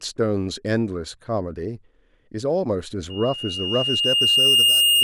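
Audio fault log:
3.10–5.04 s, loudspeaker feedback squeal: the microphone picks up its own loudspeaker, and near 2.8 kHz the loop gain tops unity, so that tone feeds itself, swelling over about a second and a half into a piercing whistle roughly 10 dB above the speech until the clip ends.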